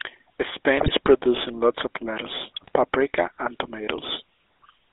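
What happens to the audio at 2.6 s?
From 2.62 to 2.72 s the speech breaks into a brief squawk and gargle, with a pop-like jump in level and a warped, smeared tone lasting about a tenth of a second. These are GSM bit errors. Corrupted bits reached the decoder, so the filter, pitch and gain values it rebuilt were wrong, bending the spectrum and throwing the loudness off for each damaged frame. The length fits a handful of consecutive 20 ms frames.

Around and through that burst, the voice carries the buzzy, gravelly roughness of the GSM full-rate codec. The sound is band-limited to roughly 300 Hz–3.6 kHz, so everything higher is gone. The codec models the vocal tract and excites it with sparse, regularly spaced pulses, which produces the grainy texture. That texture is plainly audible and fits the 13 kbps full-rate scheme.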